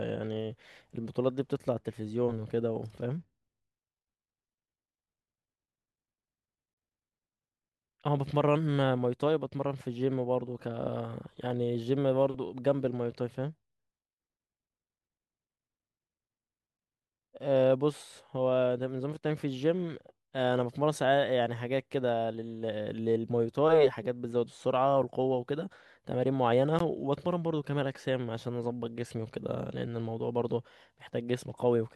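A gap at a join of encoded pieces at 26.79 s: separately encoded 10 s segments were joined untrimmed, leaving a 16 ms silence that briefly interrupts the speech.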